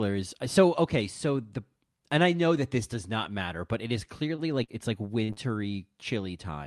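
At 4.35 to 4.54 s a sound lingers slightly too long with a faint buzz or dip. This is a short stall from a late packet: the jitter buffer ran dry, so the receiver stretched the last sound by about 26 ms until the packet arrived. Nothing is lost.

At 4.64 to 4.71 s there is a brief smear or wobble. This is short concealed packet loss: about 40 ms never reached the decoder, and the receiver filled the gap by extending the previous sound.

At 5.24 to 5.32 s the sound turns into a held buzz or fading hiss, then jumps ahead. This is a burst of packet loss. Consecutive packets went missing, about 40 ms of audio was dropped, and the concealment faded out as the gap went on.

Straight after, at 5.33 to 5.39 s, another short concealed packet loss smears roughly 40 ms of audio.

At 5.72 to 5.77 s a second short stall from a late packet holds a sound about 20 ms too long, again without losing anything.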